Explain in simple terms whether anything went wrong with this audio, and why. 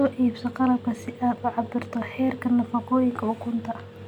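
Nothing went wrong with this audio: the speech comes through steadily with no dropouts, clicks, distortion or other technical problems to hear.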